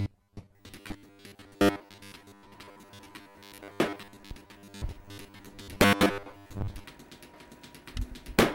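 Everyday sounds, with robotic sound from repeated short buffers from 0.01 to 6.84 s. A rigid, metallic buzz at 100 Hz is imposed throughout, with most of the signal replaced by repeats. This likely comes from late audio delivery forcing playback to loop a roughly 10 ms segment while real audio is skipped.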